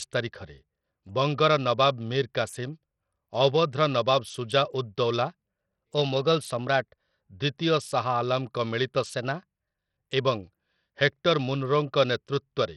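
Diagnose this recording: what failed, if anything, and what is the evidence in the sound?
Codec stage: the whole speech track has heavy Bluetooth SBC compression damage, likely from a starved bit pool, with gritty quantisation noise, flickering treble and nothing above 14 kHz. That fits a low rate around 64 kbps, where the top sub-bands get almost no bits.

Buffer stage: right after "ନବାବ ସୁଜା ଉଦ୍ ଦୌଲା", from 5.27 to 7.22 s, speed jumps 5.6% and pitch rises about 95 cents, nearly a semitone, then snaps back. That's a drift correction step, likely clock-matching software abruptly changing the playback rate to rebalance its buffer.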